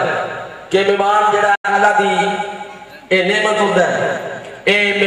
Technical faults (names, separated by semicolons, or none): digital broadcast dropout